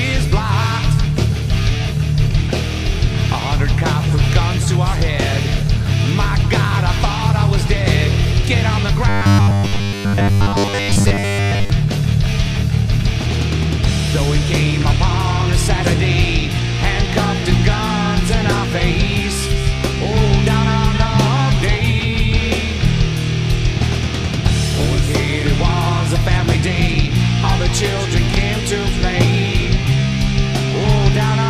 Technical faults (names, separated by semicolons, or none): robotic sound from repeated short buffers